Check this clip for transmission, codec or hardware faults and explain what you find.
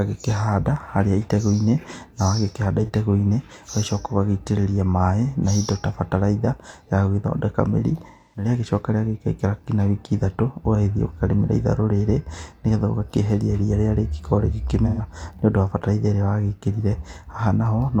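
There's one kind of fault here, AAC frame loss with concealment, and it happens three times in this speech. It hits at 2.83 to 2.90 s (about 43 ms, which fits a single lost frame), 8.07 to 8.48 s (256 ms, about six frames) and 14.85 to 15.02 s (128 ms, about three frames). Each time the decoder lost data and rebuilt the gap from the last good spectrum, so you get a smeared, noisy patch where the speech should be.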